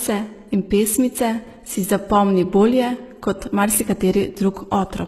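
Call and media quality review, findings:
Likely HE-AAC compression, throughout the speech. S sounds are gritty and lispy. The treble is copied up from lower bands, and nothing is above 12.3 kHz. The heavy damage fits about 16 kbps.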